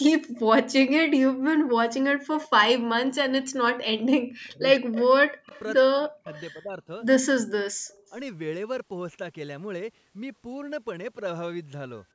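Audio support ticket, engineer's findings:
Echo leak: faint delayed repeats of the speech at 0.35–0.41, 2.37–2.48, 4.44–4.51, 5.49–5.62, 6.33–6.42 and 7.9–8.09 s. Constant 152 ms lag, about 25 to 35 dB below the direct speech. Likely far-end echo canceller letting residual loudspeaker pickup through. A fixed lag and a low, scrappy copy distinguish it from room reverb, which decays smoothly with no repeat.

Speech suppressed in double talk: 4.53–8.13 s, speech level repeatedly pulled down, deepest about 40 dB, roughly 2 s affected in total, overlapping the echo bursts. Likely echo canceller attenuating both sides during simultaneous talk. It tracks the overlap, which separates it from packet-loss dropouts (abrupt, unrelated to the other side) and from AGC pumping (slow, smooth level swings).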